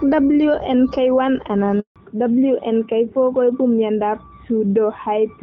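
At 1.80 s the speech cuts out in a handover gap. The call switched networks and no frames arrived in between. The sound dies within a few tens of milliseconds. Silence follows for 160 ms, until the new link starts at 1.96 s.

From 1.96 s to the end comes a fallback to narrowband. Before the gap, the wideband HD Voice sound is clear, which fits AMR-WB at about 12.65 kbit/s. After it, nothing remains above 4 kHz, which points to AMR-NB near 12.2 kbit/s. The speech turns duller and rougher.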